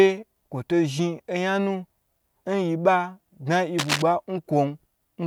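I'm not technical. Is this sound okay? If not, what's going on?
No. At 3.78 to 4.02 seconds, a worn cable or plug was likely moved, making its electrical contact flicker. That cable scratch noise comes through as a brief, fairly loud scratchy rustle laid over the speech for about a quarter of a second.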